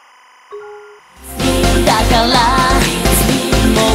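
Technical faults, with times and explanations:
0.00–2.18 s, timecode bleed: a faint chirping warble near 1 and 2 kHz, about 35 dB down, from 25-frame linear timecode leaking across.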